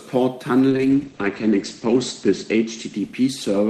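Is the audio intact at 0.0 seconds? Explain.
Yes, the speech is intact at 0.0 seconds, with no audible fault at that moment.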